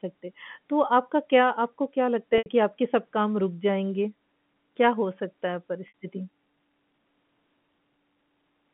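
At 2.38 s, about 80 ms of audio drops out, ending near 2.46 s. The gap is covered by packet loss with pitch repetition. The receiver loops the last pitch period it got and fades it down. The sound briefly holds on a buzzy, static tone, then the speech resumes. The same happens at 5.88 s, with about 60 ms lost. Both gaps fit a few 20 ms packets going missing. The narrow telephone band can be heard throughout.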